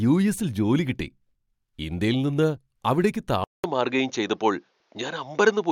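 A speech recording in which the capture path changes partway through: at 3.44 s, right after "ഇന്ത്യയിൽ നിന്ന് അവിടേക്ക്", there is a 0.2 s gap, and from there to the end the sound is duller, with nothing above 6.9 kHz and a new background noise roughly 45 dB under the speech, though loudness stays much the same. This is likely an input switched to a poorer device, with a narrower-band microphone taking over mid-recording.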